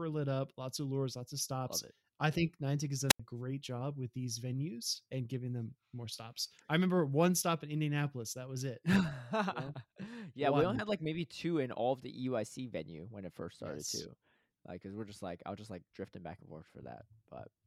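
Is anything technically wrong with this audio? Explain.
Yes. At 3.08 to 3.20 s the speech has a wireless microphone squelch dropout: the analogue FM radio link fades, hiss rises, and the receiver's squelch mutes the output for about 84 ms. That brief swell of static before the hole distinguishes it from a digital dropout's clean gap.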